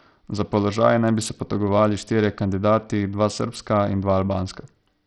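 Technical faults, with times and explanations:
Throughout, Bluetooth SBC compression: the speech has a gritty, coarse noise riding on it and the treble flickers in and out, which fits a low bit budget near 64 kbps. This is likely SBC starving its upper sub-bands and quantising the rest crudely.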